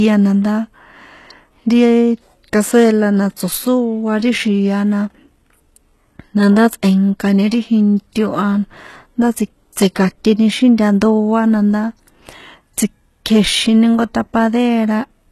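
Throughout, the speech shows HE-AAC compression: nothing above 12.3 kHz, and sibilants sound gritty and metallic, likely from treble rebuilt by band replication at about 16 kbps rather than plainly muffled.

Pre-echo comes at 3.37 s, after "cazuela na", and at 9.73–9.76 s, before "tsika̱nteni xíjnta ndoa na". Codec noise leaks ahead of each attack as a brief hiss, unlike a click, which is a single tick.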